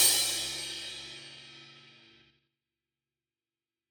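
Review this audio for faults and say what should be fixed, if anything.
Zipper noise appears from 2.22 to 2.56 s, where the level falls by roughly 25 dB in coarse steps of 6 dB each, at around ten per second, with no smoothing between them. Each jump leaves a small click, so the drop ticks audibly instead of gliding. A smooth fader move changes gain continuously and adds nothing of its own. To prevent this, interpolate gain changes per sample or ramp them across each buffer.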